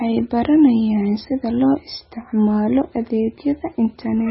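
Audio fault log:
throughout: MP3 compression, likely the cause of the heavily damaged, watery speech with nothing above 5.6 kHz. The encoder appears starved of bits, which fits a very low bitrate near 17 kbps. It removes the treble outright, dulling s sounds, and drops weak frequency lines that flicker on and off between frames, causing swirling and smeared consonant onsets. A spectrogram shows a flat ceiling at 5.6 kHz and patchy, speckled gaps below it.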